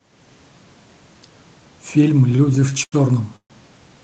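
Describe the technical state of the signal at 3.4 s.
At 3.4 s the signal is inside a call audio freeze running from 3.36 to 3.53 s. The last sound is stretched into a fading buzz that drops to near-silence for about 80 ms, filling roughly 136 ms in all. Then the speech picks up exactly where it left off, now about 136 ms late. That points to packets likely stalled in transit with the jitter buffer running dry. Unlike a dropout, nothing is cut out; a gap is inserted instead.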